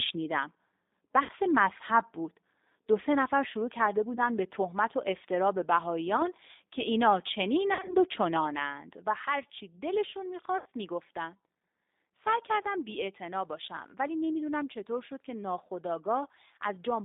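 G.729 codec coding runs through this whole speech recording, confining it to about 250 Hz to 3.7 kHz with a rough, synthetic edge that fits an 8 kbit/s vocal-tract-and-pulse model. VoIP packet loss concealed by the speech codec appears at 1.23–1.32 s, 4.15–4.20 s, 7.74–7.95 s and 10.58–10.67 s, where the decoder extrapolates from the last pitch and filter into a fading buzzy tone or coloured noise. About 60, 20, 100 and 80 ms of audio are lost, and the third gap is scattered with a longest run of 50 ms.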